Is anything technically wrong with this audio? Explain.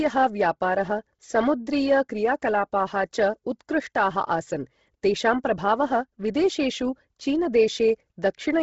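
Yes. Bluetooth LC3 compression is audible throughout the speech, with heavy codec damage and nothing above 7.7 kHz. The likely cause is the LE Audio transform codec running at a starved bitrate, consistent with about 16 kbps in 10 ms frames. It discards most of the upper spectrum and substitutes shaped noise for the missing detail. The voice therefore carries a breathy, grainy edge, and its top end ends abruptly at 7.7 kHz.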